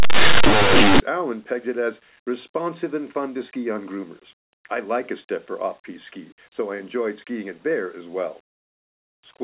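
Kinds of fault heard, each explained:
Linear audio read as companded, 0.0 to 1.0 s: for the first second the speech turns into very loud, harsh distortion, because plain linear 8-bit samples are being expanded as if they were mu-law codes. Small values just to one side of zero map onto the loudest outputs of the expansion curve, while their counterparts on the other side stay tiny. Quiet passages therefore blast out as lopsided, clipped-sounding noise instead of soft sound.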